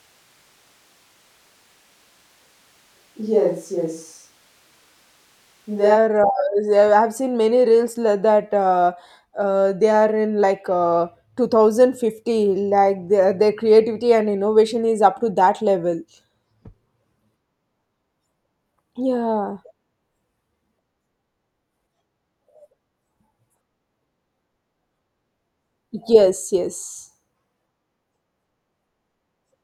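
A switch to a distant microphone runs from the start to 5.95 s. The speech sounds roomy, hollow and bass-light, at similar loudness, with room noise about 35 dB down, then abruptly turns close. The close microphone's feed was likely missing, leaving a farther pickup.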